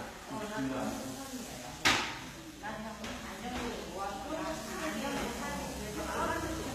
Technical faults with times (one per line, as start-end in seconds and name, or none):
0.00-6.75 HE-AAC compression